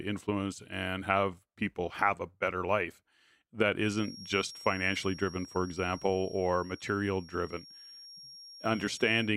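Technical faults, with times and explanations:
3.78–9.37 s feedback whistle: a thin 5.6 kHz tone about 20 dB below the speech, likely a speaker-to-microphone loop ringing near feedback, never building into a howl.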